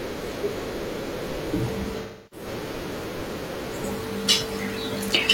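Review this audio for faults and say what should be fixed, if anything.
AAC frame loss with concealment affects this speech from 2.02 to 2.46 s. About 300 ms of coded audio is missing, which points to roughly seven lost frames. The decoder covers the gap by reusing the last good spectrum with scrambled signs or interpolated energy. The patch sounds smeared and noisy. To prevent this, protect the stream with retransmission or forward error correction.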